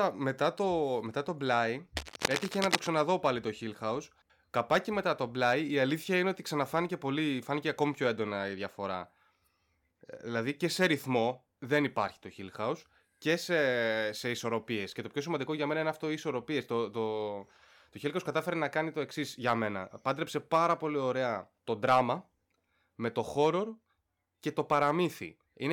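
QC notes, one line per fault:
1.96–2.87 s, cable scratch noise: a burst of dense, irregular crackle and rustle lies over the speech for just under a second, ending just before "πάλι το". It sits only a few decibels below the speech, so it competes strongly with it. The rough, uneven texture is what rapidly fluctuating contact resistance produces, likely from a worn cable, connector or control being moved while recording.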